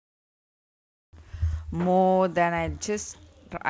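Onset clipped by the voice detector, 1.11 to 1.13 s: the speech jumps in abruptly, its first 20 ms missing and replaced by comfort noise, likely because the sender's detector reacted late to renewed sound. Over the call path, nothing is heard above 8 kHz.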